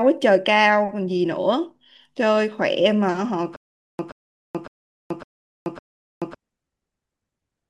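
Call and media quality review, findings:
Stutter with silent gaps, 3.56 to 6.35 s. Player or stream likely stalled, replaying its last buffered fragment at each retry, then running empty. Heard as a 128 ms burst repeating five times, 428 ms digital silence between, 557 ms period. Speech in that span lost.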